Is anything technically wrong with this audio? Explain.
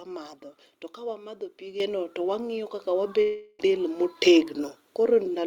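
Yes. This speech clip has two microphone volume steps and one long network dropout.

At 1.8 s and again at 2.82 s the microphone volume is stepped up, by about 8 dB and then about 3 dB. Automatic input gain control raised the device level in single jumps, so voice and background noise get abruptly louder together.

From 3.21 to 3.61 s there is a gap of roughly 0.4 s with no real audio, most likely a long network dropout. The receiver filled it with a fading continuation of the preceding sound, heard as a buzz or hiss, and the speech resumes with that stretch missing.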